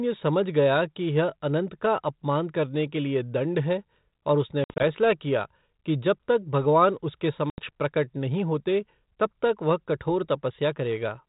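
At 4.64 to 4.84 s, between "और उसने" and "किया कि जब तक", the speech breaks into hard-edged silent gaps totalling 100 ms, the longest 60 ms, then returns slightly distorted. At 7.50 to 7.59 s, after "जब तक भगवान उसके" and before "प्रकट नहीं होते तब", an 80 ms hole does the same. This is packet loss on an ADPCM call, here 32 kbit/s G.726. Audio was dropped, and the decoder's predictor and step size lost track of the sender's and took a few tens of milliseconds to realign.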